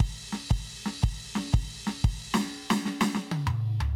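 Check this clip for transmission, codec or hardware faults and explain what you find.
No faults can be heard in this music.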